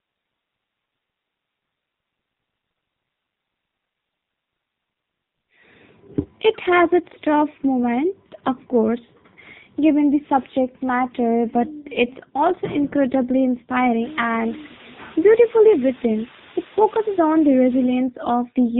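Speech runs through an AMR narrowband mobile codec for the whole clip: nothing above 4 kHz survives, and the voice has a buzzy, synthetic quality. That points to AMR-NB at a low mode, around 6.7 kbps. A plain telephone band-limit would only sound dull, not artificial. From 14.03 to 17.96 s, low bit depth with dither adds a loud, even hiss, roughly 15 dB below the speech, which fits about 6 bits. Undithered truncation would instead give gritty distortion that tracks the voice.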